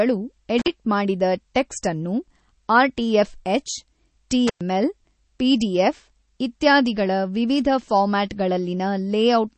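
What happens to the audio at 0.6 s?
Around 0.58 to 0.68 s there's an intermittent contact. Something in the path, like a loose plug or cable, loses connection and the line opens for roughly 46 ms. You hear the sound drop out and break up across that stretch, with crackle at the edges where the contact breaks and remakes, and some hiss filling the gap while the line is open.

Running through that moment, as through the whole speech clip, is plainly audible codec damage, likely MP3 compression at about 32 kbps. At that rate the encoder is starved of bits, so it zeroes weaker frequency lines that then flicker on and off frame to frame. That gives a watery, swirly texture, with metallic chirps on s sounds and smeared attacks. There's also nothing above about 8.3 kHz, so the top end is dull.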